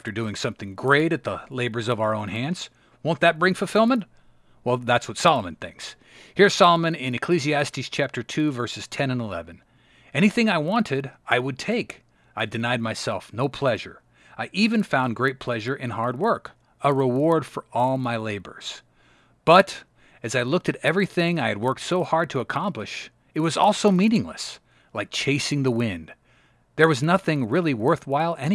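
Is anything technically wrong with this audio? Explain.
Yes. Resampler restarted on every block, throughout: each 40 ms block was converted from 48 kHz to 24 kHz in isolation, leaving edge errors heard as a 25 Hz buzz under the speech.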